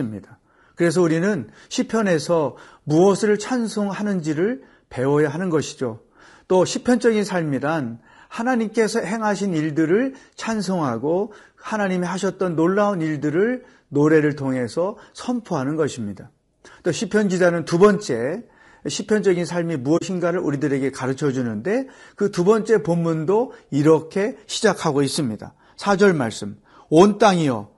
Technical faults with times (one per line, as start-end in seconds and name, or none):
0.00-27.77 low-delay AAC compression
19.97-20.02 AAC frame loss with muting